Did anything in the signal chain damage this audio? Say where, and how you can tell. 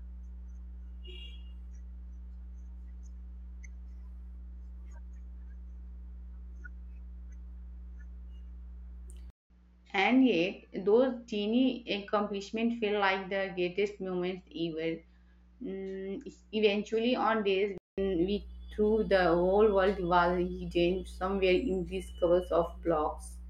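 Yes. Mains hum at 60 Hz runs through the whole recording, about 20 dB below the speech: analogue wiring, where a ground loop couples the power line in.

Input switched to a poorer device from 9.30 to 17.98 s, likely at the driver stage: a 200 ms silence, nothing above 7.6 kHz, and a new noise floor roughly 55 dB down, starting before "we threw the whole".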